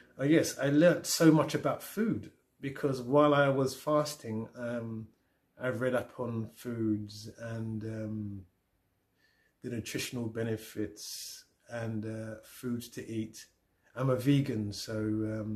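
No technical faults can be heard anywhere in the clip. There are no dropouts, glitches or other disturbances at any point in the sound.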